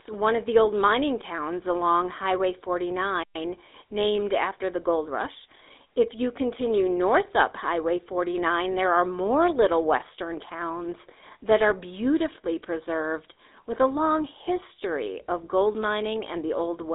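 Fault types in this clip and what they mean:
GSM full-rate codec: speech coded by a vocal-tract model excited with sparse regular pulses, giving a plainly audible buzzy, gravelly roughness throughout, which fits a 13 kbps GSM coder. A spectrogram shows a 300 Hz to 3.7 kHz telephone band, empty above 3.8 kHz.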